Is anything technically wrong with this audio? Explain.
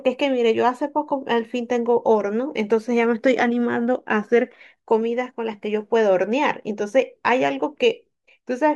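No, nothing technically wrong stood out on listening to this speech recording.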